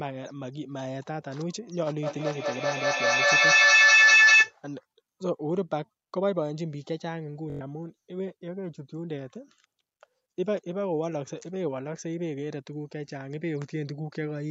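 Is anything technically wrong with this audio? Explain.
Yes, two faults.

From 2.03 to 4.56 s there is a feedback howl. Two devices on one call in the same room form a loop, and each pass adds gain. A tone near 2 kHz builds, pulses about every fifth of a second, and peaks about 13 dB above the speech.

From 7.50 to 7.61 s there is a Bluetooth stutter. Packets arrived late or not at all, so the receiver replayed its last short buffer. About 107 ms of sound becomes a rapid buzzing repeat, which points to several lost packets. The speech then resumes further on.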